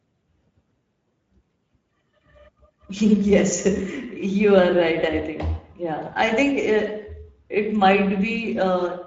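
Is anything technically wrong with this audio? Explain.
Yes: throughout, Speex codec coding roughens the speech into a hoarse, noisy buzz. The coarse CELP excitation, consistent with roughly 17 kbps, fits this rather than a transform codec's swirl, and nothing lies above 7.6 kHz.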